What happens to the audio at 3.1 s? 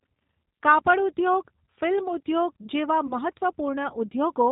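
From 3.07 to 3.14 s the speech suffers VoIP packet loss concealed by the speech codec. About 20 ms of audio, consistent with a single lost packet, is missing. The decoder extends its last pitch and filter state with falling gain, producing a brief smear that stays weak until the frames rebuild.

The whole clip also carries the G.729 codec at 8 kbit/s. Its narrowband coding strips everything above 4 kHz, and its pulse-coded excitation and vocal tract model give the speech a slightly rough, synthetic texture, which persists through and around this moment.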